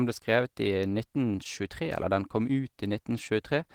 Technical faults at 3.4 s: none

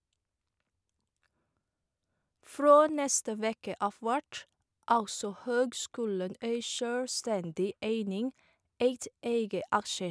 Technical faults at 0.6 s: none

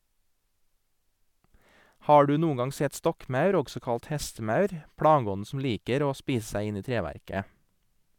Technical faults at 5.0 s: none

